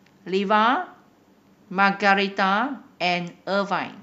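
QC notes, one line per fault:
No faults found in the speech clip; nothing to log.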